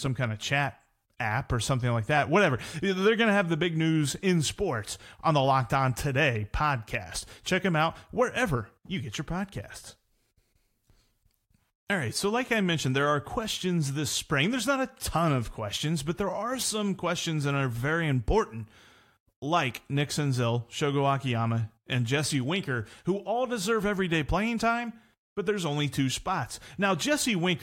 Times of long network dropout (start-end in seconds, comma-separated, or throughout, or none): none